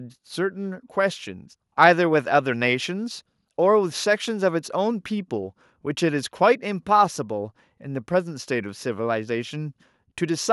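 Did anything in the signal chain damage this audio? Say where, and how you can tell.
No, nothing in the signal chain has damaged this speech recording. No stage, from capture through to playback, leaves any audible trace on it.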